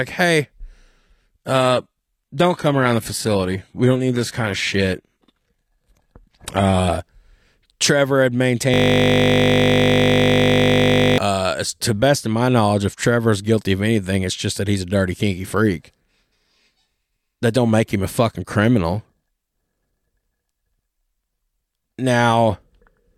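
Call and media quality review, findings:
Adaptive stream at a lower bitrate, 0.98 to 6.98 s. Quality changes abruptly, with more codec smear. No gap at either edge. Sounds like the player stepped down from a full-band AAC stream to a low-rate HE-AAC rendition, roughly 96 down to 20 kbit/s, after the connection slowed, then climbed back.

System hang loop, 8.74 to 11.18 s. A steady 50 Hz buzz replaces the sound. That's one 20 ms slice repeating exactly, over a hundred times in a row. Points to a frozen driver or host while the audio hardware kept replaying its ring buffer. The loop length fits a 20 ms buffer.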